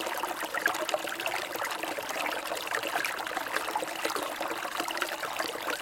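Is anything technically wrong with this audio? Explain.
Yes. There are two tiny skips in the sound, at about 2.05 s and 4.03 s. They come from overlap between stream segments. The audio arrives in 2-second segments whose timestamps overlap slightly at each boundary, and the player trims the overlap as if it were duplicated material. It wasn't, so a few milliseconds of real sound are lost and the waveform jumps discontinuously. That produces a skip right at the 2-second spacing of the segment joins.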